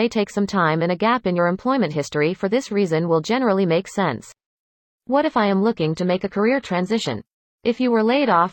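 At 4.57 s, right after "will generally make sense", the speech drops abruptly to an adaptive stream at a lower bitrate and stays there until the end. There is no gap, just a sudden dulling: the highs thin out and codec artefacts rise, which points to a switch from AAC-LC at 96 kbit/s to a low-rate HE-AAC stream at 20 kbit/s. On a spectrogram the energy above 14.9 kHz vanishes at that instant, and the upper band turns smeared and patchy. The waveform runs on without a break.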